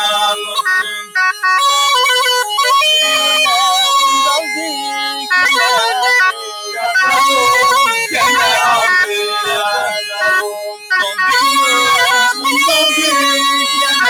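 Hard clipping runs through the whole clip: the signal is overdriven by about 14 dB past the stage's limit, flattening peaks on nearly a third of samples into a harsh fuzz on every loud sound. A noise suppressor applied to music or sounds is also active throughout, treating sustained content as noise and swinging its level by about 5 dB, so the audio pumps and thins. The sound is cut by the noise suppressor at 0.34–0.61 s (about 8 dB), 0.82–1.15 s (about 19 dB), 4.41–5.31 s (about 7 dB), 6.32–6.83 s (about 10 dB), 9.93–10.21 s (about 7 dB) and 10.43–10.91 s (about 18 dB), where held sound sinks noticeably.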